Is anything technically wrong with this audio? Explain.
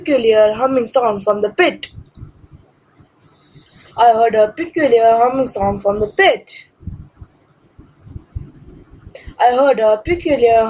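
No, nothing technically wrong is audible in this recording.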